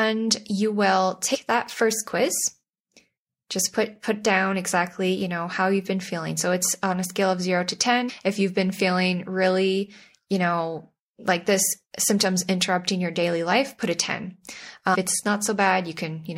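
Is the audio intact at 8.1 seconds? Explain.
No. Around 8.08 to 8.10 seconds the speech has compressed frames skipped: roughly ten frames, about a fifth of a second of audio, are never decoded, so the sound jumps ahead.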